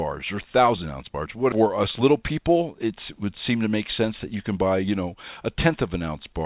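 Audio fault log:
1.52 s, skip ahead: the speech jumps forward with no gap, and roughly a second of audio is simply gone. Packets were dropped while later ones were already queued, so the two sides of the missing stretch are butted straight together.
1.62–4.84 s, jitter buffer speed-up: the speech runs at about 107% speed at the same pitch, so it sounds a bit rushed. The buffer was holding too much, so the receiver kept trimming tiny pitch-period slices, around a fifth of a second in total, over the G.711 call path, which tops out near 4 kHz.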